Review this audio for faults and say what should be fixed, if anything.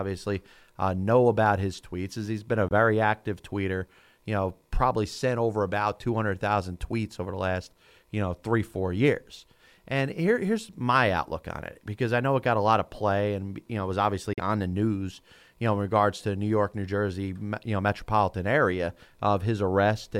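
Two brief holes point to a Bluetooth dropout: 2.69–2.72 s, between "he's been a" and "active tweeter you know", and 14.33–14.40 s, between "you know it was" and "on the news you". Packets likely missed the headphones' deadline, losing about 21 ms and 43 ms of audio, and the sound resumes as though it had kept playing. A waveform shows flat silent gaps, and a spectrogram shows blank vertical strips across all frequencies.

Keeping the source close to the headphones, clear of Wi-Fi congestion, or allowing a larger playback buffer would prevent these gaps.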